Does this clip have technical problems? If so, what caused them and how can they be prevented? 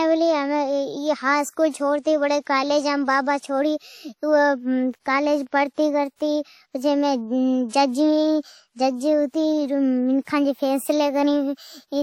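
Yes. WMA compression runs through the whole clip, and the damage is plainly audible. The speech has a ringing, washy quality, with a hiss that swells and fades along with the voice, and there is no content above 19.9 kHz. This is likely a transform codec coding long blocks, which smears quantisation noise over tens of milliseconds and drops weaker detail, consistent with a low bitrate around 48 kbps. To prevent it, keep a lossless or high-bitrate master.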